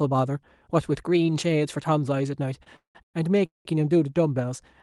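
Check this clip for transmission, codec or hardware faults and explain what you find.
One transmission fault appears, repeated stalls (stutter), from 2.63 to 3.67 s. Packets arrived late, emptying the jitter buffer four times. Concealment stretched sound across about half that stretch, gaps up to 193 ms, so speech drags and stutters without loss. The Opus call path's audio tops out near 12 kHz, consistent with a moderate call bitrate.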